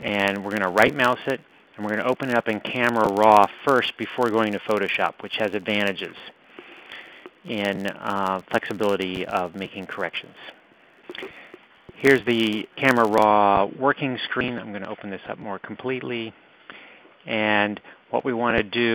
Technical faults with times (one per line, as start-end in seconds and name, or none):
0.00-13.27 filter restarted on every block